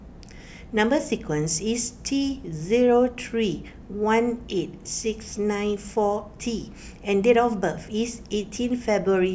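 Nothing in this recording stands out as a technical fault, so there's nothing to point to at any moment along the way.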